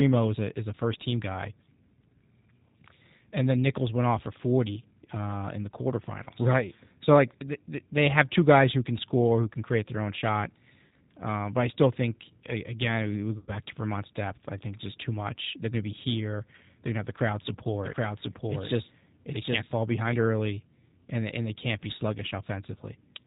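The speech sounds rough and slightly synthetic throughout, with nothing above 4 kHz. That fits the G.729 codec at 8 kbit/s, which rebuilds each 10 ms frame from a vocal tract filter, a pitch predictor and a few pulses, so the codec damage is plainly audible.

At 6.24 to 6.28 s, 10.87 to 10.92 s and 13.38 to 13.53 s, the sound smears into a buzzy tone or coloured noise that fades, and stays weak briefly afterwards. This is VoIP packet loss concealed by the speech codec, with gaps of about 20, 40 and 100 ms filled by extrapolating the last frame.

From 17.84 to 20.14 s, a second full-band copy of the speech runs roughly 0.7 s behind at about the same level. It starts and stops abruptly and has no room colour, which points to a doubled audio track, likely a second capture path or an edit holding two copies out of step.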